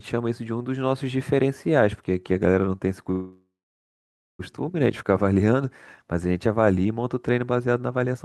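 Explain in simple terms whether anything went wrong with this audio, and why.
Something on the call most likely held up the stream of audio packets for a moment, and the receiver ran out of sound to play. This is a call audio freeze. From 3.11 s to 4.41 s the last sound is stretched into a fading buzz, then about 0.9 s of silence, before the speech resumes where it stopped. Nothing is lost, but everything after 4.41 s arrives about 1.3 s later than it should.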